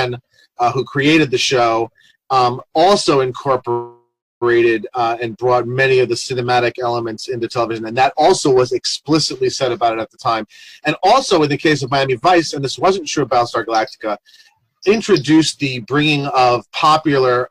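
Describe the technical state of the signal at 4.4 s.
At 4.4 s the signal is at the tail end of a call audio freeze running from 3.71 to 4.43 s. About 0.70 s of sound is filled in: the last audio carries on as a fading buzz or hiss, then roughly 0.33 s of near-silence. Playback then resumes where it stopped, with nothing lost but the rest of the audio delayed by about 0.70 s. The likely cause is delayed packets draining the jitter buffer.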